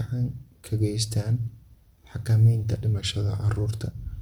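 From 2.94 to 3.60 s the speech abruptly slows by about 5.9% and drops roughly a semitone (104 cents), then snaps back to normal. This drift correction step likely comes from clock-matching software retiming playback in one jump to rebalance its buffer.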